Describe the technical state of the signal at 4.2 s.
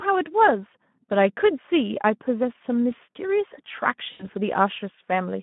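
VoIP packet loss concealed by the speech codec is at work at this moment, from 4.11 to 4.28 s. About 80 ms of audio went missing, which fits four lost frames. The decoder filled the gap by extending its last pitch and filter settings while lowering the gain each frame. The speech smears into a buzzy tone or coloured noise that fades. Because each frame builds on the one before, the sound stays weak or distorted for tens of milliseconds or more after about 4.28 s.

The Speex codec also colours the whole clip, including this point. The damage is plainly audible. The speech sounds noisy and hoarse, which fits a low bitrate of around 11 kbps. There are too few bits for the excitation, so the fine detail of the speech is replaced by a rough approximation. The band is held between roughly 150 Hz and 3.5 kHz. This gives a thin, telephone-like tone with no air above that limit.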